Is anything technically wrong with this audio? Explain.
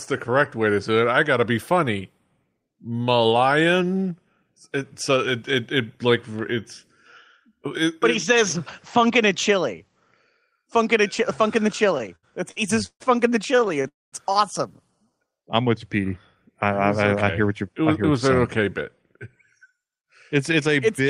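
Yes, the network path has delivered this speech unevenly, producing stutters, a freeze and audible changes in playback speed.

Repeated stalls (stutter) occur twice after "funkin' the". From 11.95 to 13.02 s, the jitter buffer ran dry nine times, and the receiver stretched the last sound to fill about 0.33 s, the longest gap 141 ms. A second burst, 13.56 to 13.86 s, has six shorter gaps of at most 22 ms. The speech drags and stutters. A spectrogram shows smeared, repeated horizontal bands where the stretched sound fills each gap.

A call audio freeze follows at 13.88 to 14.14 s. The sound trails off and about 210 ms is silent before speech resumes where it stopped. The likely cause is packets being held up long enough for the buffer to empty, adding about 241 ms of delay. The waveform shows a decaying tail and then a flat line.

A jitter buffer slow-down runs from 14.85 to 15.11 s, just before "I'm with you". 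Repeated pitch periods add 44 ms, so playback runs at 86% speed with the pitch unchanged. Sounds are drawn out, and the spectrogram shows harmonics stretched in time at the same frequencies.

A jitter buffer speed-up spans 17.06 to 19.85 s. The buffer held excess audio, so short pitch-period pieces were cut, removing roughly 0.2 s in total. Speech runs at 107% speed, sounding slightly hurried at the same pitch, and the spectrogram shows syllables compressed horizontally.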